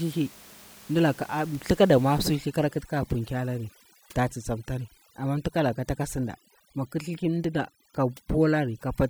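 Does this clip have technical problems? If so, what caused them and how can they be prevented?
Yes. Right after "dulaka thakala", at about 2.35 s, overdone noise removal kicks in and stays to the end. The room noise, sitting about 24 dB below the speech, drops and breaks up into little twinkling specks, and the quieter parts of the speech are pulled down along with the noise. To prevent it, back off the reduction amount so bands near the noise floor are only lowered, not gated out.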